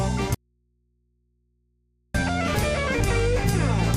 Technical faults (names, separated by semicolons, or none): audio dropout to a faint residue